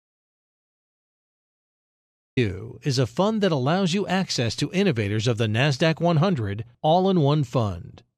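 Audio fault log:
0.00–2.37 s, audio dropout to silence: the input was likely lost through a disconnected device, failed link or stray mute while recording continued, so silence was written. The clip opens in silence, with no room tone, and the speech only begins at 2.37 s, cutting in mid-flow.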